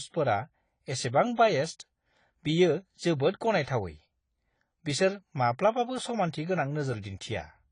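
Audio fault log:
Throughout: AAC compression. Nothing above 10 kHz, dull smeared speech with fizzy warbling sibilants, likely from AAC-LC coding at a low bitrate, consistent with around 24 kbps.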